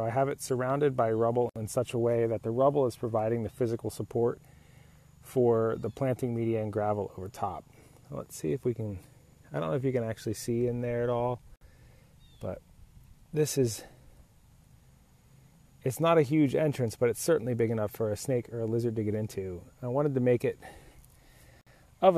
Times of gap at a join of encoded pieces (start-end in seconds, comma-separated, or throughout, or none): 1.49-1.56, 11.56-11.61, 21.61-21.67